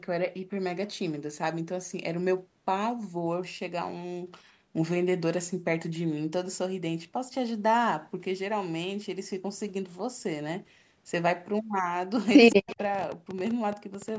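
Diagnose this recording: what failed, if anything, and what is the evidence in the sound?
From 12.15 s to 14.17 s, a train of clicks ticks over the sound at about 13 per second, unevenly spaced, roughly thirty in all, with peaks slightly louder than the signal. This points to the analogue wiring or interface stage, likely interference injecting repeated pulses.

Between 12.5 s and 12.75 s, a faint, delayed copy of the sound trails 167 ms behind, about 20 dB down. This echo leak sits in the call processing: a far-end loudspeaker was picked up by its microphone, and the echo canceller likely let that residue back through.

From 12.55 s to 12.79 s, the speech dips sharply, falling by roughly 40 dB at its deepest and losing about 200 ms overall. This is speech suppressed in double talk, again at the call-processing stage. The canceller likely mistook overlapping talk for echo and attenuated both.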